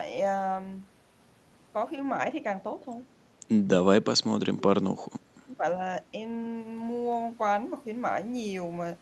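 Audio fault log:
4.11–5.64 s, speech suppressed in double talk: the speech sinks by as much as about 30 dB for roughly a second and a half, likely because an echo canceller, hearing both sides at once, attenuated the talker along with the echo.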